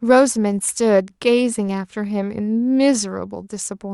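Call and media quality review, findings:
No faults found in this speech clip.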